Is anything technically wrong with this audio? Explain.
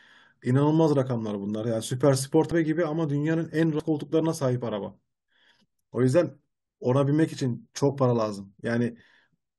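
Yes. Compressed frames are skipped at 2.50 s and again at 3.78 s in this speech clip. At each point a run of compressed audio never reaches the output, either missing from the file or rejected by the decoder as damaged, so playback leaps forward by roughly 150 ms, consistent with about seven 21.3 ms frames. Each join is heard as an abrupt jump in the speech.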